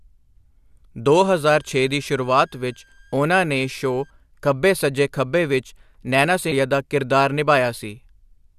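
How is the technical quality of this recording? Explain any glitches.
There are two glitches in the speech: a faint whistle early on and a short blip later.

From 1.08 to 4.10 s, just before "ਖੱਬੇ ਸੱਜੇ ਖੱਬੇ ਵਿੱਚ", there's a switching supply whistle. A power supply is running in an audible burst mode or beating with another one, so a thin tone wandering between about 1.57 and 1.67 kHz sits quietly well under the voice.

At 6.50 s, right after "ਸੱਜੇ ਖੱਬੇ ਵਿੱਚ ਨੈਨਾ", there's damaged data in the compressed stream. The decoder hits corrupted frames, loses sync and hunts for the next good header, and you hear that as a quick blip.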